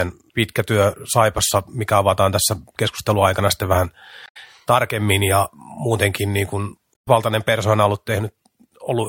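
At 4.25 to 4.37 s, just before "tarkemmin ja muutenkin niin", and again at 6.91 to 7.08 s, after "ja muutenkin niin kuin", the speech breaks into a brief chirp, squawk, click or short hole of damaged data in the compressed stream. Corrupted bytes left the decoder misreading frames and hunting for the next valid header. On a spectrogram each burst is a short disturbed stretch. The waveform shows a disturbed patch lasting roughly 0.12 s and 0.17 s.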